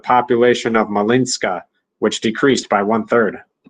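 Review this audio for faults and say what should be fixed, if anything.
Brief rough, noisy patches at 0.65–0.75 s and 2.49–2.63 s are lost packets rebuilt from error correction: low-bitrate copies carried in following packets covered about 60 ms and 80 ms.

A steadier network path with less packet loss would keep the decoder from relying on these rougher backup copies.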